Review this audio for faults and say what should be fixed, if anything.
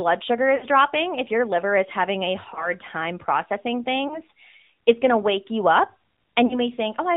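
The call path ran the speech through the AMR narrowband mobile codec, sampling at 8 kHz and rebuilding the voice from a vocal-tract model fed by a few pulses per subframe. The bandwidth therefore stops at 4 kHz for the whole clip, leaving it dull and boxy, and the damage is plainly audible as a buzzy, synthetic edge. That level of coarseness fits a mid-rate mode of around 10 kbps. To prevent it, carry the call on a wideband codec such as AMR-WB or EVS, or at a higher bitrate.

Radio errors corrupted speech frames, so the decoder discarded them and repeated the last good pitch and vocal-tract settings with falling gain. This happens four times. From 0.56 to 0.65 s the voice smears and sags for about 60 ms, which fits three lost 20 ms frames. Shorter dips or warbles follow at 2.54 to 2.71 s and 4.08 to 4.19 s. A stretched, fading patch runs from 6.46 to 6.61 s, and after each one the voice returns weak or rough for a moment. 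To prevent these, improve radio coverage or use stronger channel coding and redundancy on the link.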